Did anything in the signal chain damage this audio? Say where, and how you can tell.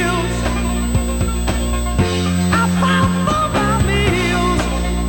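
Yes: USB whine in the analogue wiring, an 8 kHz tone throughout, roughly 20 dB below the signal, as 125-microsecond bus microframes leak through power or ground.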